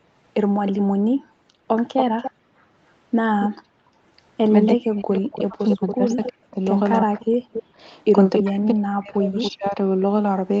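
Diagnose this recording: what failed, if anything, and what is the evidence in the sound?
The failure sits in the call-processing stage, in the echo canceller. At 0.66–0.71 s, 1.96–3.49 s, 4.66–8.43 s and 9.42–9.52 s a delayed second copy of the speech runs behind the direct sound. This is an echo leak, likely from a loudspeaker-side canceller passing residual pickup back down the line. The lag is 317 ms in the first scrap and 281 ms afterwards. It sits roughly 15 dB down at first, then only about 5–10 dB below the speech. On a spectrogram it shows as a fainter duplicate of the harmonic striations, offset about 0.28 s to the right.

Background gated by the echo canceller appears from 0.8 to 2.58 s, totalling about a second, and again at 3.59–4.02 s for about 0.4 s. The room tone collapses by as much as about 40 dB, then returns when the canceller releases its suppression. The waveform shows the noise floor flattening to near silence between sound events. 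On the spectrogram the grey background wash turns abruptly black across all bands up to the 8 kHz ceiling of the Opus call path, then reappears.

Speech suppressed in double talk spans 4.74–9.78 s, overlapping the longest echo stretch. Across roughly 3 s in total the near-end talker dips and breaks apart, with drops approaching 40 dB. The likely cause is the canceller failing to separate local speech from the returning far-end signal and attenuating both. The waveform shows chopped, hollowed-out envelopes. On the spectrogram the upper harmonics thin or whole blocks go missing.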